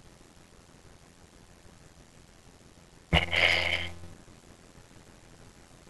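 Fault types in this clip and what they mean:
Block size mismatch (padded): one stage writes shorter blocks than the next reads, consistent with a 512-sample buffer only partly filled and the rest zero-padded. The repeated gaps give an 86.1 Hz buzz throughout, and the speech runs at 0.625 times normal speed with its timbre kept.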